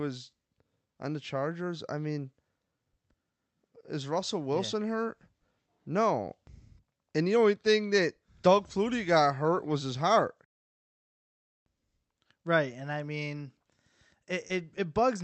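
Short concealed packet loss at 14.47 to 14.51 s in this speech: 20 ms never arrived, so the decoder extended the preceding sound, leaving a brief smear.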